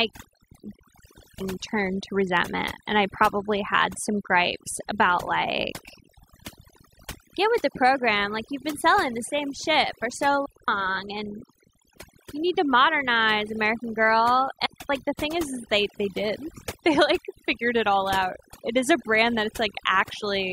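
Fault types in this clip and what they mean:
Overdone noise removal: Noise reduction was applied far too hard across the whole recording. The processor pulls individual frequency bands down or out whenever they sit close to its noise estimate. Quiet parts of the voice fall below that line and get removed too. Between phrases the background drops and breaks up into twinkling, warbling specks.
Digital wireless dropout: The wireless link lost too much data, so the receiver muted itself behind a very fast fade. Each event is a clean hole of near silence with no noise burst on either side. The first runs from 0.72 to 1.41 s, about 0.69 s long. Two shorter gaps follow, from 10.46 to 10.68 s and from 14.66 to 14.90 s. Each of those lasts under a quarter of a second.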